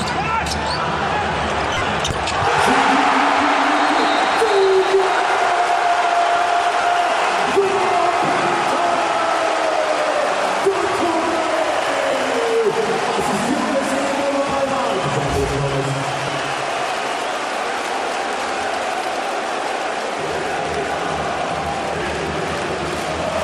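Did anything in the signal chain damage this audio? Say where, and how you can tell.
Yes, there are lost LE Audio frames on the Bluetooth link at 1.74–1.82 s, 5.18 s, 6.81 s, 12.11 s, 16.27 s and 22.02 s. LC3 concealment repeats the spectrum with random signs, so tones become noise, which shows as smeared vertical patches on a spectrogram.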